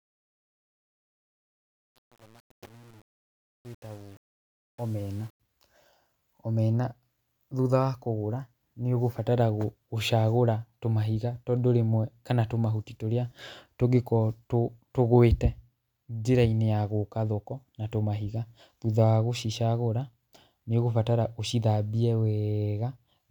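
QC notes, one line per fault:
0.00–5.40 s, truncation distortion on a fade: the fade-in sounds gritty and grainy at its quietest start. The gain stage kept too few bits without dither, which fits an 8-bit path, so low levels collapse into coarse square steps before the fade clears at 5.4 s.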